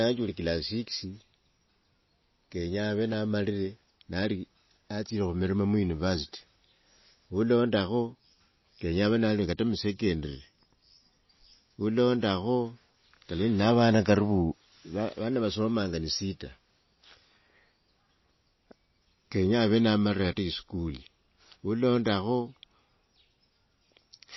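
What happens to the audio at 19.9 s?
At 19.9 s the speech carries the same damage heard throughout the clip, likely from MP3 compression. Nothing sounds above 5.8 kHz, a fixed treble cut. Starved of bits, the encoder drops weak frequency lines frame by frame. The result is a watery, swirly sound with metallic chirps on s sounds, which fits a bitrate around 24 kbps.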